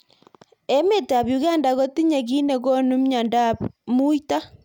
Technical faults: none

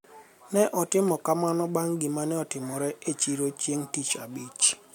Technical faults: damaged data in a compressed stream

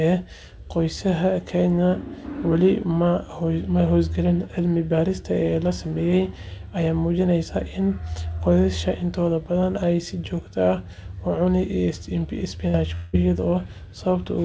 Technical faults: burst of packet loss; long network dropout

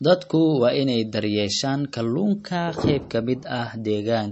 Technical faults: MP3 compression

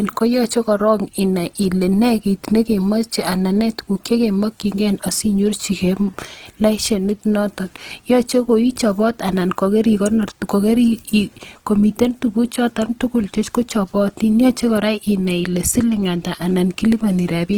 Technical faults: Opus compression

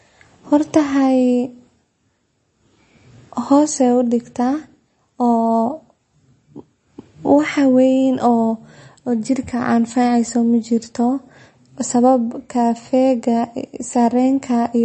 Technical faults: MP3 compression

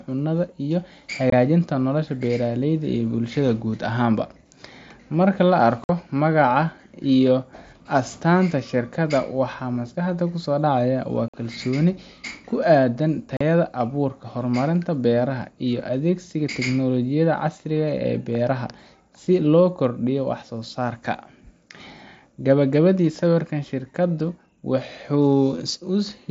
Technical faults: unconcealed Bluetooth headset packet loss

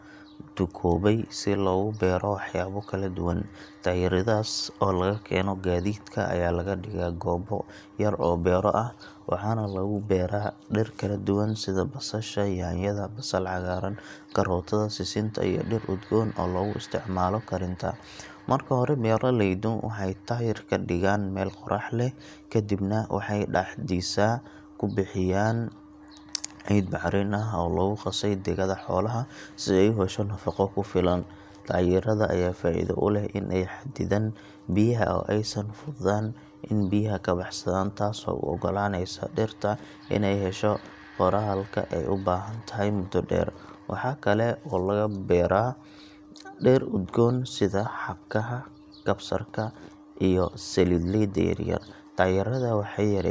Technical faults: none

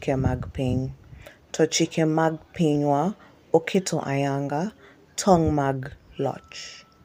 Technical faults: none

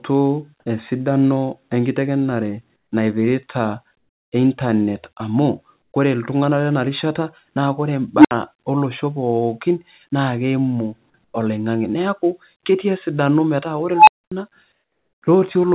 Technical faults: comfort noise in place of the background; unstable filter

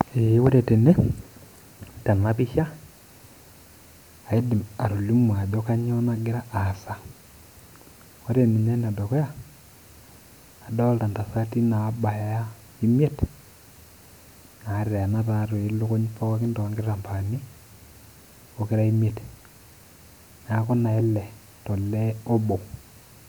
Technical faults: none

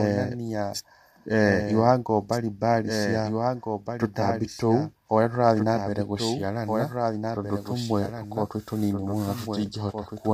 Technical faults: doubled audio track; low-delay AAC compression

